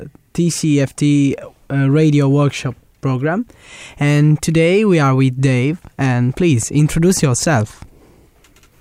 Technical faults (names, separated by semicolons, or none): none